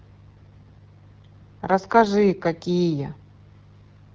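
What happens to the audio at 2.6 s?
At 2.6 s you're hearing the same AMR wideband (HD Voice) codec damage that runs through the whole speech clip. The raspy, rough texture suggests one of its lowest rates, probably 8.85 kbit/s, where the pulse-driven vocal tract model gets coarse and the band above 6.4 kHz is just shaped noise.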